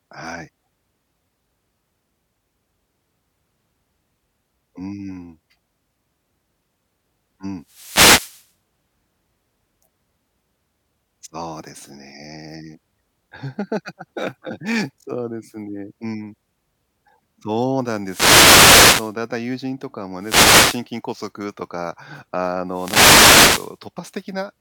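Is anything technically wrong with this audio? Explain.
Yes. The speech is hit four times by wireless microphone noise: at 7.61 to 8.53 s, 18.02 to 19.16 s, 20.19 to 20.85 s and 22.68 to 23.79 s. Each time, the FM radio link from the microphone fades as reflected signals cancel, and the receiver's own noise rises into a swish of static. Unlike a digital dropout, the sound is buried under hiss rather than cut to silence.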